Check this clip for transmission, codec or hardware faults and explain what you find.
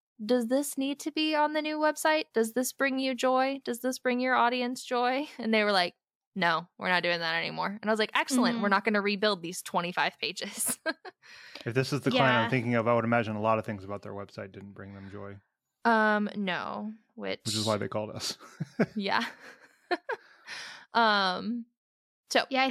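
Nothing stood out on listening to the speech in this clip.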